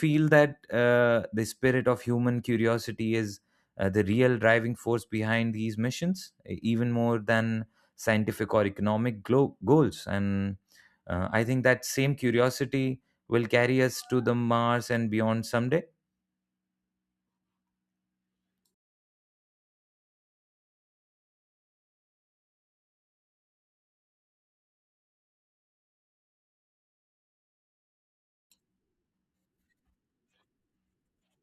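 Nothing stood out on listening to the speech recording.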